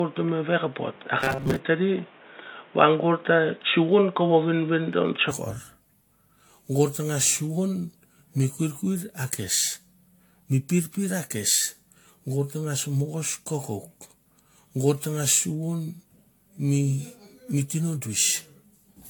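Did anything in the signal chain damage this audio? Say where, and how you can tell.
Yes. Throughout the clip, the speech sounds swirly and hollow, with smeared consonant attacks and nothing above 19 kHz. This is more damage than a single 96 kbit/s AAC-LC pass would cause, so the codec stage likely produced generation loss from several successive re-encodes.

From the start to 5.31 s, the speech is dull and boxy, with a noise floor about 30 dB down and a level about 5 dB different. It clears abruptly with no gap. At the input stage, the input likely switched from a poorer device back to the main microphone.

From 1.21 to 1.58 s, the speech turns into a rigid metallic buzz at 134 Hz while still loosely following the syllables. Most of that stretch is repeated material. This is robotic sound from repeated short buffers, likely a driver or buffer underrun looping roughly 7.5 ms chunks.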